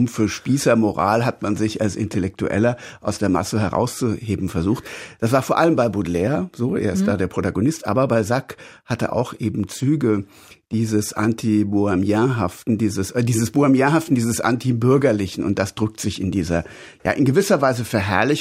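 Nothing technically wrong turns up anywhere in this speech recording, so there are no times or causes to point to.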